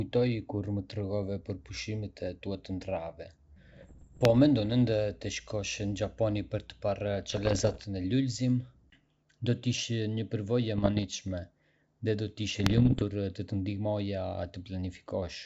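Bit errors on an ADPCM link corrupt this G.722 wideband speech in four bursts, from 3.72 to 4.41 s, 7.30 to 7.85 s, 10.78 to 11.05 s and 12.51 to 13.04 s, with roughly 0.7 to 1 percent of bits flipped. Each wrong bit throws off the decoder's step size and predictor, so the error rings on for several milliseconds and is heard as pops, rough crackly bursts and brief jumps in level.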